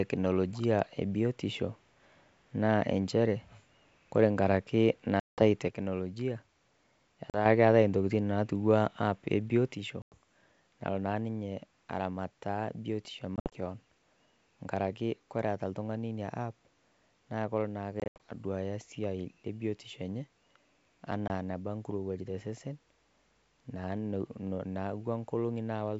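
This is a speech clip with packet loss on an ADPCM call. Hard silent holes appear at 5.20 to 5.39 s, 7.30 s, 10.02 s, 13.36 to 13.54 s, 18.00 to 18.17 s and 21.28 s, each followed by briefly, slightly distorted speech while the decoder re-syncs. Separately, the level falls by about 6 dB from 5.68 to 7.46 s, ending just before "keatai intokitin", and again from 9.75 s, right after "app e", to the end, likely one channel dropping out before the mono sum.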